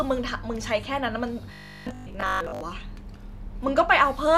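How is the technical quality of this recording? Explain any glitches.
The recording has one clear glitch. From 1.53 to 2.61 s the speech turns into a rigid, metallic buzz at 50 Hz that only loosely tracks the words. This is robotic sound from repeated short buffers, likely caused by audio arriving too seldom: a 20 ms chunk is replayed, repeating for most of that stretch, while the real signal is skipped.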